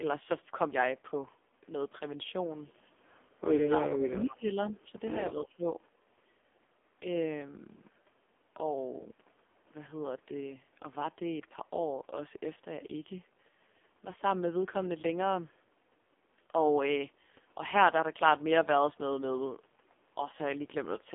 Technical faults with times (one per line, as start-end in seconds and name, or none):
0.00-21.14 AMR narrowband mobile codec
2.68-2.81 echo leak
3.56-5.03 speech suppressed in double talk
4.31-4.36 echo leak
4.70-4.78 echo leak
5.31-5.69 speech suppressed in double talk